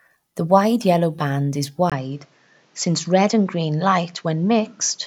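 A speech recording that changes character at 1.90 s, right after "wide yellow band is": from there to the end the sound is duller, with nothing above 7.6 kHz, preceded by a 20 ms gap. This is likely an input switched to a poorer device mid-recording. On a spectrogram the upper band vanishes at that instant and a faint new noise floor appears, roughly 40 dB down. The waveform shows the brief dropout but no obvious step in level.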